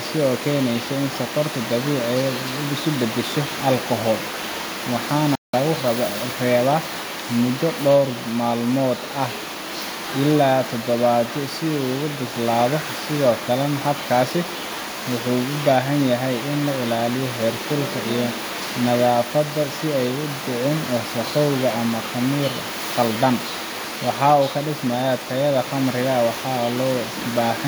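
At 5.35 s, the player likely ran dry of data, causing a playback stall: the speech cuts to silence for about 180 ms, then resumes.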